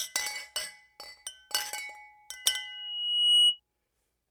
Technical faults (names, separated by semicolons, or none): loudspeaker feedback squeal